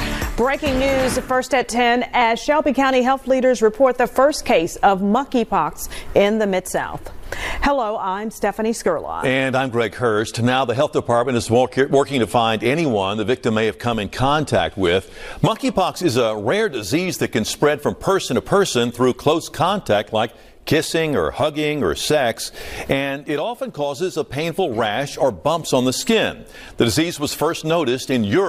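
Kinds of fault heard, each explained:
No technical fault can be heard anywhere in the audio; level, continuity and frequency content hold steady throughout.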